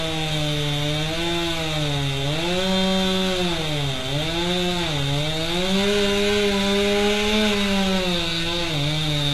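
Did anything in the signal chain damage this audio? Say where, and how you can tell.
Yes, at the codec stage: HE-AAC compression is audible throughout, and heavily. Nothing sounds above 12.3 kHz, and the treble below that sounds gritty and metallic. This likely comes from spectral band replication copying lower bands upward at a very low bitrate, which fits about 16 kbps.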